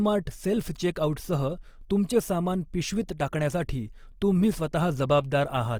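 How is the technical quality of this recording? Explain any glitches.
The speech carries plainly audible coding damage from start to finish, which points to Opus compression in its music (CELT) mode. The encoder keeps each band's energy and, short of bits, fills starved bands with folded or noise content. Voiced sounds therefore turn rough and grainy rather than swirly or hollow as with MP3, and the spectrum stays full, reaching about 20.2 kHz. The damage fits a low rate near 24 kbps.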